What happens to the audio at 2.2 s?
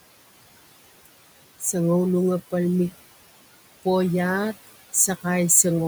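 Noise suppressor artifacts at 2.2 s, as throughout the clip: bands judged to be steady room noise are pulled down about 17 dB between words, then the noise swells back under the speech.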